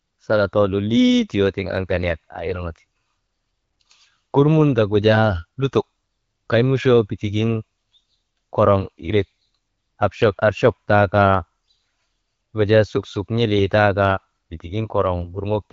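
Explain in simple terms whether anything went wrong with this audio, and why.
Something went wrong near the end, from 13.57 to 13.62 s, just after "wujaa suksuk". For that brief moment the speech turns hoarse and scratchy, with a gargling edge, though its pitch and loudness stay roughly the same. These are AMR bit errors. The call used the AMR wideband (HD Voice) codec, whose coding damage is light and keeps the speech clear. On a weak link, a small share of the less protected bits arrived flipped. The decoder then misplaced its sound-building pulses, and the damage fits about three spoiled frames.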